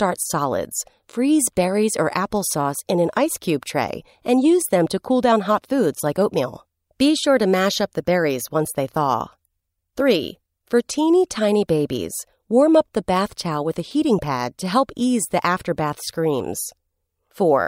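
No technical faults can be heard anywhere in this recording.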